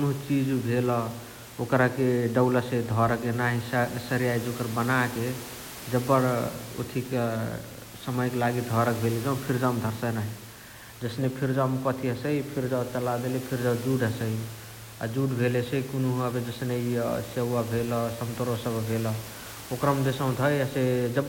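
No technical faults can be heard anywhere in the speech, with only the microphone's own room background sitting about 17 dB beneath it.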